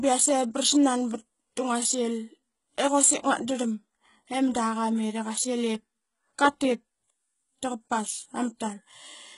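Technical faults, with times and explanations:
Throughout, HE-AAC compression. The speech treble sounds gritty and metallic, and s sounds turn harsh. Nothing is present above 11.1 kHz. The heavy damage fits a bitrate near 12 kbps. The treble is likely rebuilt from copied lower bands, so its harmonics misalign.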